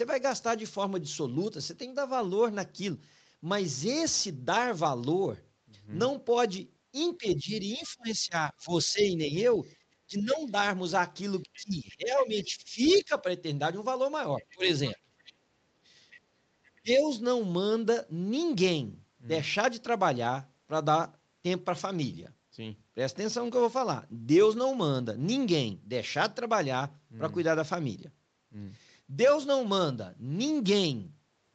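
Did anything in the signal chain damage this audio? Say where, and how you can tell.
Yes. Speech suppressed in double talk: the talker dips by up to about 25 dB at 7.18–10.5, 11.46–13.24, 14.41–15.06 and 16.71–17.04 s, likely because the call's echo canceller ducked everything.

The other side's voice is leaking through faintly at 9.63–10.34 s (about 35 dB down), then louder at 11.4–13.02 and 14.37–16.69 s. That's likely residual loudspeaker echo the canceller missed.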